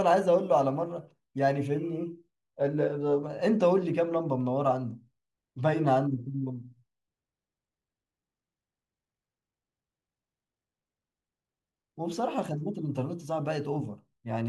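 No technical faults are audible.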